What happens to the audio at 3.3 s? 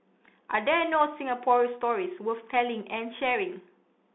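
The speech at that moment is still passing through the Bluetooth CVSD headset codec that runs through the whole clip. Each sample is a one-bit up-or-down step, which fits a 64 kbps stream. Sound is confined to roughly 200 Hz to 3.6 kHz. A plain telephone band filter would sound clean, but here s sounds turn scratchy and a granular hiss sits under the speech.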